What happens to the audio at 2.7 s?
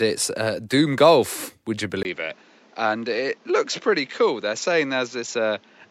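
At 2.7 s the speech sits inside a change that starts at 2.03 s and runs to the end. A brief 20 ms gap marks the switch. Afterward nothing passes above 7.6 kHz, so the speech turns duller. It is also somewhat quieter, with a new noise floor well below it. The likely cause is an input switched to a poorer device.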